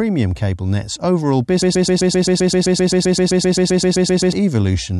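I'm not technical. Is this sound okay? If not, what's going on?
No. Right after "cable net's overall", from 1.62 to 4.33 s, a broken-record loop takes over: the same 0.13-second scrap of speech repeats 21 times back to back. The playback or stream likely stalled, and the speech that belonged there is lost.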